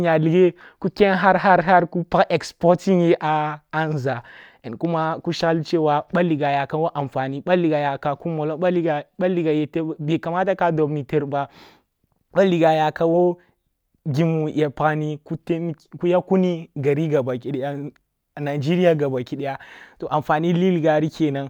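From 16.57 s to 20.0 s the speech picks up sample clock jitter. The converter's clock wavers by around two microseconds, so samples land at slightly wrong moments. Steep, bright sounds suffer most. A fine hiss-like roughness, roughly 40 dB down, rides on the loud parts.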